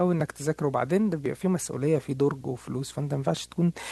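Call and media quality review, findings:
Video or display buzz, present throughout the clip. Probable component: a screen or video cable coupling into the audio path. Result: steady 60 Hz field-rate buzz with hash above it, sitting roughly 30 dB under the speech.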